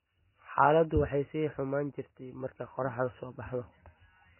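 MP3 compression artefacts run from start to finish, and this is likely a heavily squeezed MP3 encode. Nothing reaches above 3 kHz, so the speech sounds dull. An encoder that is short of bits drops the treble at a fixed point and discards weaker frequency lines, which then flicker in and out between frames. Here that gives a watery, swirling texture and blurred consonant onsets, which fits a very low bitrate, around 16 kbps.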